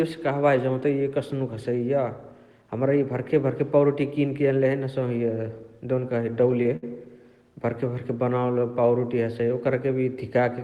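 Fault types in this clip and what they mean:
Repeated stalls (stutter): From 6.31 to 6.84 s, packets arrived late and the jitter buffer emptied six times. The receiver stretched the last sound across each wait, up to 63 ms, filling 113 ms in all. Nothing is lost, but the speech drags and stutters.
Jitter buffer slow-down: Between 8.17 and 8.88 s, the receiver rebuilt its reserve by repeating single pitch periods and bits of pause, adding 99 ms. The speech plays at 87% speed with its pitch unchanged, so sounds are audibly drawn out.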